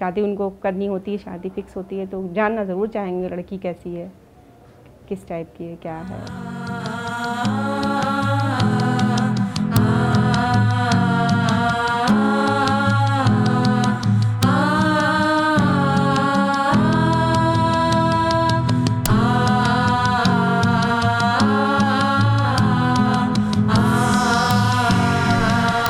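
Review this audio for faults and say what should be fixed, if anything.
Integer overflow occurs five times, at 9.76, 14.43, 19.06, 24.51 and 25.86 s. Each is a very brief, harsh crack, far sharper than ordinary clipping. The peaks go only about 1 dB or less past the limit. At those moments the integer sum wraps around to the opposite sign instead of holding at full scale, so the waveform jumps across the whole range. Prevent it by saturating or clamping every sum and gain stage rather than letting it wrap.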